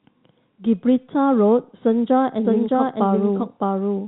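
From 2.45 s to the end, a doubled audio track adds an equally loud copy roughly 0.7 s behind, likely from a slower capture path. Unlike echo, it starts abruptly and never decays.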